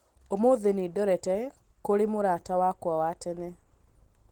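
Opus voice compression runs through the whole speech clip. The damage fits a low bitrate near 16 kbps. The band stays full, up to 20.1 kHz. Below 8 kHz the voice excitation is coded coarsely. The speech sounds plainly hoarse and slightly robotic.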